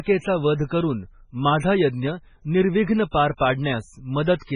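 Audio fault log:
Throughout, MP3 compression, likely, at heavy damage: the speech has a watery, swirling quality with chirpy, metallic sibilants and smeared consonant onsets, which fits a very low bitrate near 16 kbps. Starved of bits, the encoder removes everything above 10.2 kHz and drops quiet frequency lines that flicker in and out between frames. A spectrogram shows a flat ceiling at 10.2 kHz and speckled, patchy holes in the upper bands.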